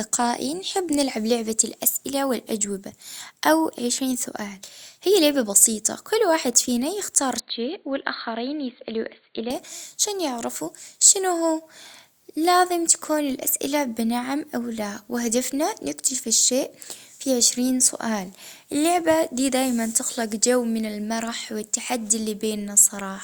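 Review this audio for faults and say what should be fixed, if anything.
From 7.40 to 9.50 s the speech turns dull and boxy, with nothing above 4.5 kHz, about 5 dB quieter, and a faint new noise floor, with no gap at either change. This is likely an input switched to a poorer device. A plain filtering or codec bandwidth drop would narrow the band without shifting level and noise at the same moment. To prevent it, lock the recording input to one device so the system cannot reroute mid-session.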